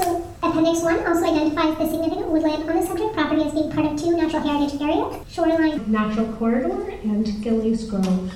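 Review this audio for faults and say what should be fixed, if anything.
From 0.0 to 5.78 s the audio runs hurried and about five semitones high, a section at the wrong speed: 1.38 times too fast, likely from a clock mismatch. Matching sample rates and clock settings between editor, player and source before export would prevent it.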